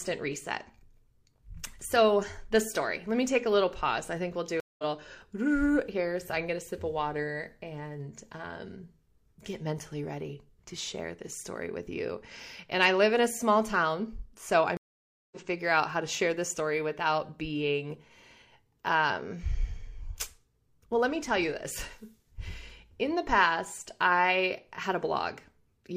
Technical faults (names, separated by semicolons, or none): stream reconnect